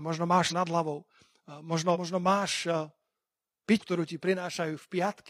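Speech with compressed frames skipped in three places: around 0.47 to 0.53 s just before "nad hlavou", 1.91 to 1.97 s, and 3.77 to 3.82 s. Each time the audio jumps forward, losing roughly a third of a second at the first spot and about a fifth at the other two, which fits several missing or rejected frames of about 46 ms each.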